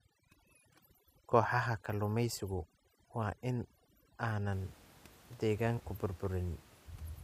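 Overdone noise removal runs from 0.0 to 4.52 s: the suppressor, set far too aggressively, drops individual frequency bands nearly to silence wherever they sit close to its noise estimate, so the pauses twinkle with isolated specks and the quieter parts of the speech are lost along with them. After that the room noise sits about 26 dB below the speech.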